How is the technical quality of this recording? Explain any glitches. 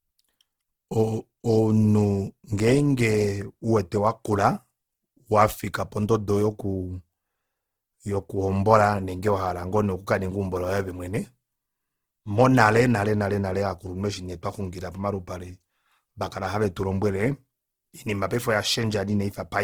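The recording carries plainly audible coding damage from start to finish. The speech sounds grainy and rough for the whole clip. The likely cause is Opus compression in its music mode. The damage points to a low rate, around 16 kbps. The encoder keeps each band's energy, but starved bands get filled with folded or noise-like content. Tonal parts of the speech therefore turn coarse and hissy, while the full bandwidth stays open.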